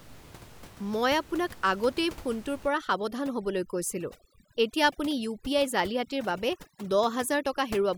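A speech recording where overdone noise removal takes over from 2.68 s to the end: the suppressor, set too aggressively, cuts out frequency bands lying near its noise estimate. The room noise, about 20 dB below the voice, drops and breaks up into twinkling specks.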